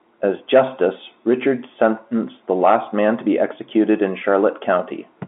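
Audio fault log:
The audio fault log has no entries for this clip.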